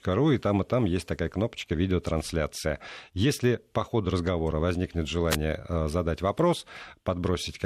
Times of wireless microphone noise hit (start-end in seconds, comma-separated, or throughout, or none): 5.30-5.36